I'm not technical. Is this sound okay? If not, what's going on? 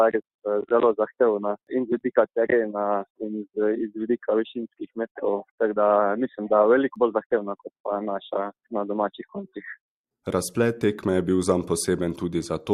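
Yes, nothing wrong with it; no faults anywhere in the clip.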